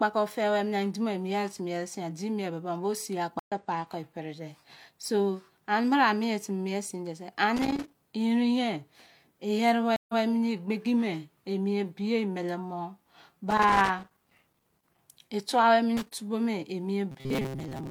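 Speech is interrupted twice when the stream connection drops and the player rebuilds its decoder mid-stream, a stream reconnect each time. At 3.39 to 3.52 s there is an 85 ms gap, and the sound picks up about a tenth of a second further on, so a sliver is lost. At 9.96 to 10.22 s the gap is 129 ms, but the server resends from 128 ms earlier, so a short stretch plays twice. Each restart comes in softly, as the fresh decoder's first frames are muted or faded up. A worn or dirty contact somewhere in the chain makes and breaks as it shifts, giving loose connector crackle: the signal is chopped into irregular scratching at 7.57 to 7.95 s, again for a longer spell at 13.50 to 14.99 s, and briefly at 15.97 to 16.14 s. From 17.11 s to the end at 17.90 s, new audio is likely reaching the playback buffer too seldom, so the software keeps replaying its last short slice while roughly half the real signal is skipped. 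This is robotic sound from repeated short buffers. The repetition stamps a rigid, metallic buzz at 133 Hz onto the speech. That pitch corresponds to a period of about 7.5 ms, which fits a buffer of that length being looped. The buzz still loosely tracks the contour of the speech underneath.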